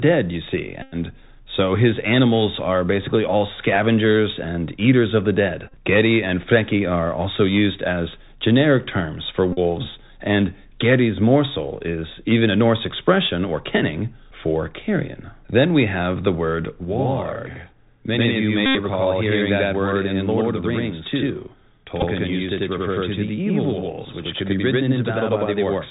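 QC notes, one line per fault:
Throughout: Bluetooth CVSD headset codec. Nothing above 4 kHz survives, so the sound is narrow and muffled. The one-bit-per-sample coder, consistent with a 64 kbps link, cannot keep pace with sharp loud peaks. Sibilants turn scratchy, and a granular hiss sits underneath.
0.82–0.95 s, 5.67–5.75 s, 9.53–9.59 s, 18.66–18.75 s, 22.0–22.04 s: Bluetooth headset packet repeated. Lost packets were replaced by replaying the previous one. Repeating every 3.75 ms in a run gives a steady buzz near 267 Hz. The repeats last 97.5, 45, 90 and 15 ms. At 5.67 s, 48.8 ms are scattered over 67.5 ms, in runs up to roughly 20 ms.
16.85 s to the end: channel delay (doubling). One channel runs about 93 ms late, which fits a 4096-sample buffer. Once summed to mono, that late copy is heard at equal level as a distinct slap echo. Each sound seems to happen twice.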